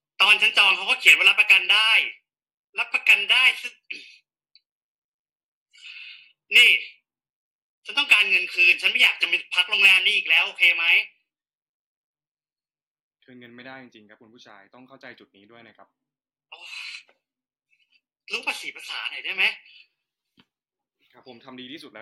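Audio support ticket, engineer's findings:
No fault found on the speech clip. Nothing audible points to any component in the capture or playback chain.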